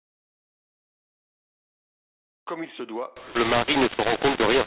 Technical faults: mu-law and A-law mixed up

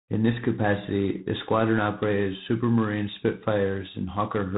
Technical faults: G.726 ADPCM

